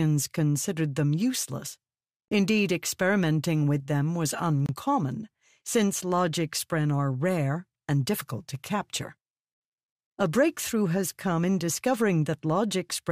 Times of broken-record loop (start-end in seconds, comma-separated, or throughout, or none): none